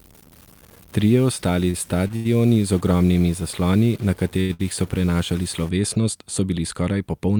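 From the very start up to 5.69 s, just before "so bili", there's a distortion riding on everything, with noise creeping into the pauses. That points to a stuck bit, likely one data bit pinned at 0 or 1 by a broken line or converter.

Between 1.65 and 2.27 s you get repeated stalls, a proper stutter. The jitter buffer ran dry four times, and the receiver held the last sound for about 153 ms in total, roughly a quarter of that stretch, with the longest hold at 88 ms. Nothing's lost, but it drags.

Then come two quick short stalls from late packets, at 4.41 to 4.51 s and 4.53 to 4.61 s. The receiver stretched the sound by 85 ms and then 60 ms while waiting for each late packet, so you hear brief held bits, back to back.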